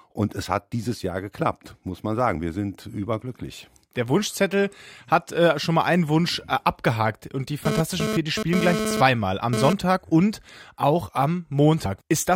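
From 7.65 to 9.73 s a GSM phone buzz cuts in: a hard, raspy tone at about 217 Hz, packed with harmonics and sitting only about 2 dB below the wanted sound. A nearby 2G handset was pulsing its transmitter 217 times a second, and the audio circuitry rectified those radio bursts into sound. The buzz stutters on and off, as data traffic does. Unlike smooth 50 or 60 Hz mains hum, it is gritty and keyed.

At 11.84 s comes damaged data in a compressed stream, heard as a brief chirp, squawk, click or short hole. Corrupt bytes left the decoder unable to read a frame, so it lost sync and jumped to the next valid frame header.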